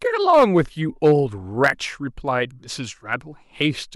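Hard clipping hits the speech peaks five times: 0.29 to 0.61 s and 1.04 to 1.12 s, each overdriven by about 4 dB; 1.64 to 1.70 s, the worst at about 7 dB; then briefly at 3.13 s and 3.62 to 3.65 s, only about 1 dB over. A stage overloaded and sliced the peaks flat, giving a crackly, gritty edge. The waveform shows squared-off tops, and the spectrogram shows bright vertical smears of high harmonics at each spot.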